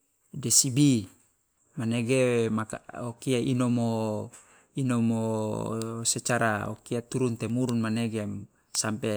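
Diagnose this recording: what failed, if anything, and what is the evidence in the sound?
Nothing failed in this speech recording, and the sound carries no evidence of any fault.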